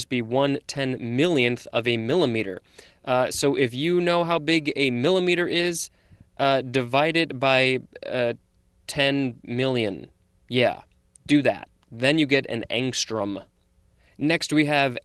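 Nothing in this speech stood out as a fault on listening.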